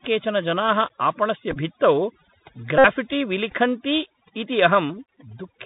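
Throughout the clip, a noise reduction stage set far too aggressively clamps down any frequency band close to its noise estimate, removing quieter parts of the speech as well. The background drops and breaks up into twinkling specks.

Also throughout, the speech has passed through the Bluetooth CVSD headset codec, a one-bit delta coder running at 64 kHz with an adapting step size, which fits a 64 kbit/s headset link. Nothing above 4 kHz survives. The damage is plainly audible: loud high content outruns the step and distorts, s sounds turn scratchy, and granular hiss sits beneath the voice.

From 1.51 to 1.57 s, the headset link drops voice packets and the chip re-decodes the previous packet each time. About 26 ms is lost, scattered over roughly 45 ms, with the longest run near 20 ms. This produces a brief buzz near 267 Hz from the 3.75 ms repeat.

From 2.78 to 2.85 s, a longer unbroken run of repeated packets covers about 60 ms, right before "विलिखन्ति इति", giving a steady 267 Hz buzz until clean packets resume.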